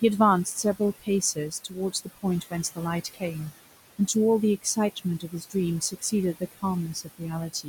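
From the start and all the way through, you can hear noise suppressor artifacts. The suppressor is pulling the steady background down by about 17 dB, but it decides frame by frame, so the room noise (which sits about 14 dB under the speech) drops away in the gaps and comes back up underneath the talking.

Between 0.45 and 3.23 s there's speech cut by the noise suppressor. It mistakes parts of the speech for noise and turns them down along with the background, by as much as about 18 dB. Altogether, something like seven-tenths of a second of material in that span gets hit, and those bits come across as swallowed or faint. The same thing happens again from 4.62 to 7.22 s, this time dropping as far as about 19 dB, and again roughly seven-tenths of a second ends up sounding muffled or missing.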